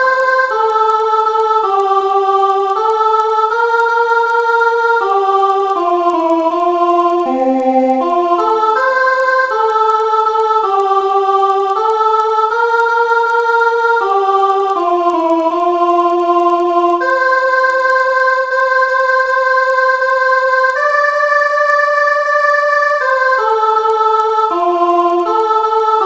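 From the start and through the whole clip, the audio carries a steady tick at 10 per second, the signature of a resampler restarted on every block. The 48 kHz to 16 kHz conversion treated each 100 ms block in isolation, so the filter lacked true neighbouring samples at every seam. On a spectrogram this shows as thin vertical lines every 0.1 s, present only where signal is. The waveform shows small discontinuities at each block edge.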